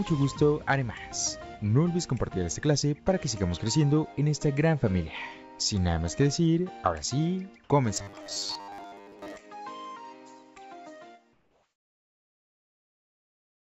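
Audio from a call path with no content above 8 kHz, which fits a wideband G.722 codec. From 7.94 to 9.40 s there is robotic sound from repeated short buffers: a rigid, metallic 100 Hz buzz over most of that stretch, which fits 10 ms slices being replayed, likely because packets arrived too seldom. Unlike codec warble, the pitch stays locked instead of wandering. From 11.33 s to the end at 13.64 s, comfort noise replaces the background. The quiet floor, about 65 dB below the loudest parts, turns steady and featureless and drops about 3 dB, likely from discontinuous transmission. Unlike ordinary noise suppression, the floor is replaced by synthetic hiss rather than merely thinned out.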